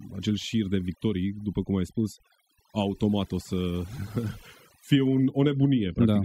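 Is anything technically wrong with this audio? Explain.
Yes. Throughout the speech, overdone noise removal: the reduction was set too hard, shutting down faint frequency bands, leaving near-silent gaps with twinkling specks.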